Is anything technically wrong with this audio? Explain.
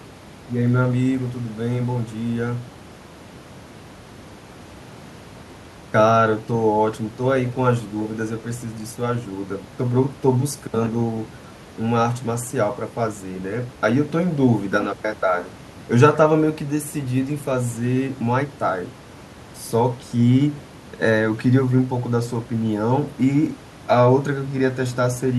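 No, there's no technical fault.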